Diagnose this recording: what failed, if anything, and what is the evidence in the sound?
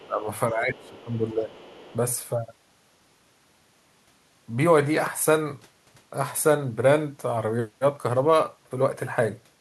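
A faint second voice sits under the talker at 0.0 to 0.06 s, 0.8 to 0.89 s and 1.55 to 1.96 s, roughly 25 to 30 dB down, in scraps. This is the other side's voice leaking through, likely from the call-processing stage. The far end played on the talker's loudspeaker, was picked up by the microphone, and the echo canceller left a residue instead of removing it.

The talker's level sags at 0.06 to 0.27 s, by roughly 15 dB, and again at 0.49 to 1.55 s, by roughly 10 dB, sounding ducked. That is speech suppressed in double talk, likely in the same echo canceller. With both sides talking at once, it could not tell the local voice from the loudspeaker echo and turned both down.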